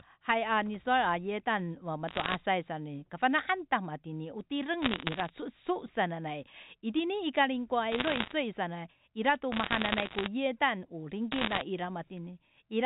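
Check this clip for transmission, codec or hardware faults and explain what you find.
Five bursts of bit errors on a digital phone line damage this speech clip, carried as G.711 mu-law telephone audio.

Bit errors on a digital phone line occur at 2.08–2.36 s, 4.82–5.30 s, 7.92–8.32 s, 9.52–10.28 s and 11.32–11.61 s. Individual bits in the 8-bit samples were flipped, at a rate of roughly 0.7 to 1.5 percent during each burst. Each flip corrupts one sample, and hits on the sign or upper bits throw it far off, producing sharp ticks. Clustered together, these become crackle laid over otherwise unchanged, 4 kHz-limited speech.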